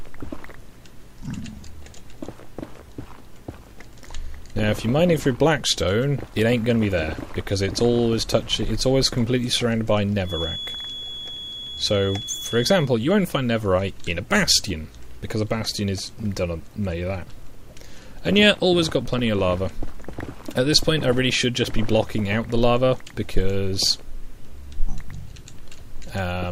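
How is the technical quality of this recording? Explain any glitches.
The recording has one clear fault, a feedback whistle from 10.22 to 12.91 s. The likely cause is a loudspeaker-to-microphone loop sitting just at the edge of feedback, so a single tone near 3.4 kHz keeps recirculating without building into a howl. What you hear is a thin, steady whistle behind the sound, around 10 dB below it, swelling and fading slowly in level for those 2.7 seconds before it drops away.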